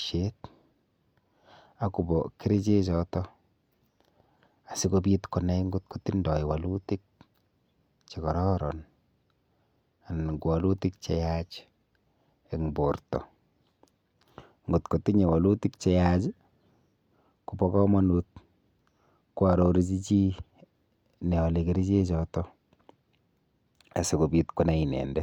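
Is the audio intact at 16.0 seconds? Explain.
Yes, at 16.0 seconds the speech plays through cleanly, with no dropout, click, distortion or other fault.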